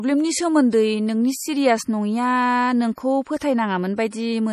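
The whole clip has a watery, swirly quality with nothing above 14.8 kHz, likely MP3 compression starved of bits, which fits a low rate around 40 kbps. From 3.38 to 3.41 s there's pre-echo: a short hiss creeps in about 33 ms ahead of a sharp attack, because the codec smeared its noise across the block.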